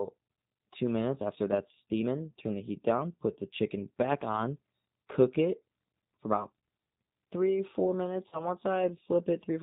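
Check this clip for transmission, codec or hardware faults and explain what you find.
Two faults are present. The whole clip is coded with the G.729 codec, which fits an 8 kbit/s stream. Its vocal-tract model and sparse pulses make the speech rough and synthetic, with nothing above 4 kHz.

At 8.29 to 8.49 s, after "three four minutes", there is VoIP packet loss concealed by the speech codec. About 30 ms went missing, and the decoder stretched its last sound into a fading buzzy tone or coloured noise. The voice stays weakened briefly afterwards.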